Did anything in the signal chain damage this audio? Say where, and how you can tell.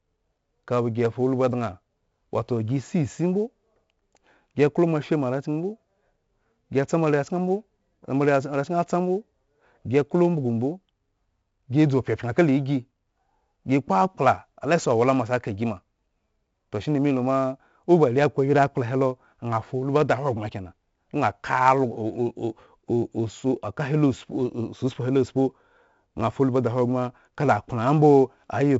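Yes, at the codec stage: 4-bit ADPCM compression throughout the speech. Each sample is coded as a coarse step from a prediction, so gritty hiss tracks every loud syllable and sharp onsets distort. Nothing remains above 7.7 kHz, which fits a 64 kbps stream.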